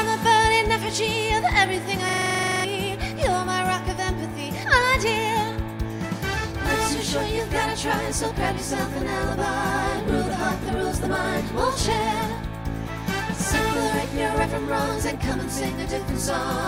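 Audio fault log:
2.09–2.65 s, system hang loop: a 43 ms slice repeats 13 times at about 23.4 Hz, giving a rattly machine-gun stutter. The system froze while the hardware kept replaying its ring buffer, which fits a 2048-sample buffer, and roughly half a second of audio is lost.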